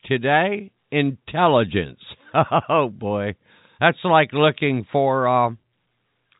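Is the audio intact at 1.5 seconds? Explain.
Yes, the audio at 1.5 seconds is intact, carrying the speech through the normal G.711 telephone coding with nothing heard above about 3.8 kHz.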